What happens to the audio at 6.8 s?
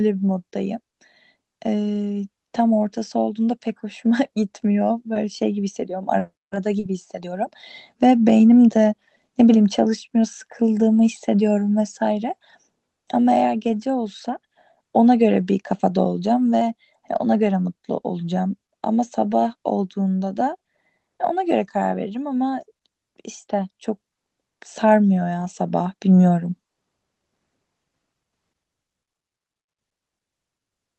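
At 6.79 s there is a short concealed packet loss, lasting until about 6.85 s. Roughly 40 ms of the speech never reached the decoder in time. The receiver covered the gap by extending the sound that came before it, then blended back into the real audio. It comes across as a brief smear or wobble in the voice, and a quick consonant in that spot can drop out entirely.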